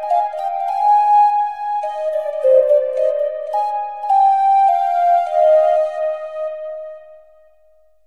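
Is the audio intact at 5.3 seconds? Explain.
Yes, at 5.3 seconds the sound plays through intact, with no dropout, click, distortion or other fault at that moment.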